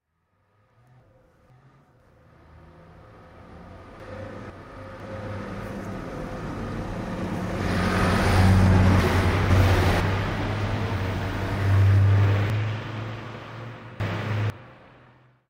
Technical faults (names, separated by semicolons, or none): chunks out of order